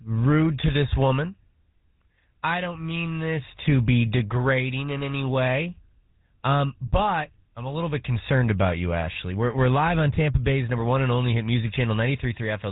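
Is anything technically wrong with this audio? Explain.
Yes. Throughout, the speech sounds buzzy and gravelly, with nothing above 3.8 kHz. This is GSM full-rate coding, probably at 13 kbps, which rebuilds the voice from coarse pulse-driven vocal-tract modelling.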